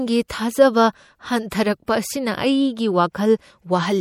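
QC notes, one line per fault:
Throughout, MP3 compression: the speech has a plainly audible watery, swirling quality, with sibilants turning chirpy and metallic. The likely cause is an MP3 encode at a bitrate that fits about 64 kbps. Short of bits, the encoder drops quiet frequency lines it judges inaudible. Those lines switch on and off from frame to frame, producing the shifting swirl, and consonant attacks smear as well.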